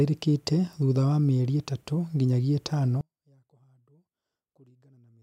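From 3.01 s, right after "mĩeri ĩtatũ nginyagia ĩtano", the speech collapses by about 36 dB to a faint remnant through to the end. This likely comes from one channel inverted: reversed polarity on one side cancels the shared, centred sound when summed to mono.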